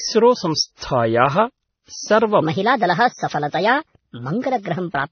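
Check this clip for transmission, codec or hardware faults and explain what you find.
Two faults are audible: a layered codec degradation across the whole clip, and a speed and pitch jump in the second half.

Transcoding between lossy codecs, throughout. The speech carries nothing above 6.3 kHz. Two different kinds of coding artefact sit on top of each other, which points to a likely chain of a WMA encode at around 64 kbit/s followed by AAC-LC at roughly 27 kbit/s. The second encoder wastes its small bit budget reproducing the first one's errors and adds artefacts of its own. The result is dull speech with mixed artefacts whose top end never returns.

Section at the wrong speed, from 2.42 s to the end at 5.11 s. Playback here runs 1.28 times faster than recorded, so the voice abruptly rises by about four semitones and sounds high and hurried. Speed and pitch shift together at the boundary, with no gradual glide. 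The likely cause is an editor or player fitting that segment to the wrong clock, which compresses its timing and raises every frequency in it by the same ratio.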